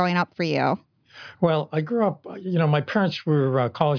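A short bit of speech, and nothing technically wrong turns up anywhere in it.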